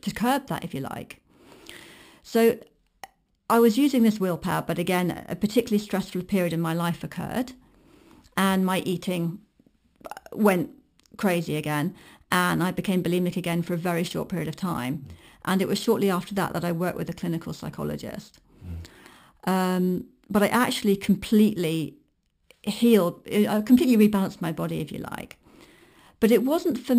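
Across the whole speech clip there is imaging from sample-and-hold upsampling. The rate appears to have been raised by simply repeating samples with no smoothing filter, which fits a source at 12 kHz brought up to 44.1 kHz. Mirror copies of the spectrum fill the 6 to 12 kHz band at about 20 dB below the signal, heard as a bright metallic fizz that tracks the speech level, with the lowest image moving against the pitch.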